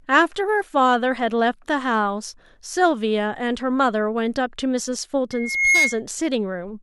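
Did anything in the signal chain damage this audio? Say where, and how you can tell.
Yes. Loudspeaker feedback squeal in the acoustic playback loop. From 5.32 to 6.01 s, a 2.2 kHz tone swells over under half a second to roughly 5 dB above the speech. The microphone is re-amplifying its own loudspeaker, where loop gain exceeds one.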